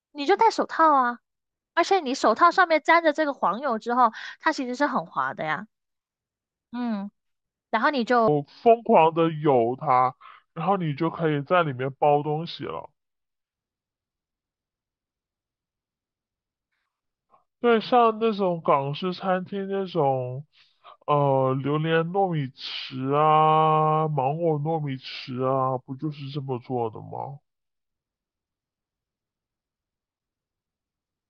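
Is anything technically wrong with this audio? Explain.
Yes. From 8.28 s to the end, a section at the wrong speed: the speech slows to 0.69x, likely from a wrong playback clock, dropping about seven semitones, deep and dragging, unlike a pure pitch shift, which would keep the tempo.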